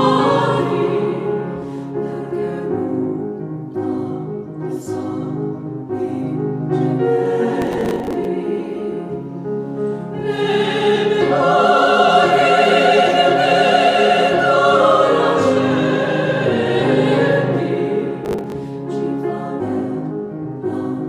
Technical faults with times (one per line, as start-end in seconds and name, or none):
7.62-8.25 processor overload crackle
18.25-18.52 processor overload crackle